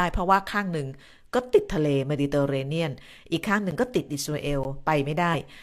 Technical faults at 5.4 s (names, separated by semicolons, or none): compressed frames skipped